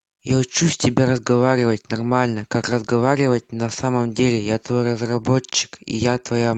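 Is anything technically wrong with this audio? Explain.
No, nothing is technically wrong with this speech; it carries the ordinary character of a WebRTC call path, with codec coding noise and a top end that stops around 8 kHz, consistent with Opus at a modest call bitrate.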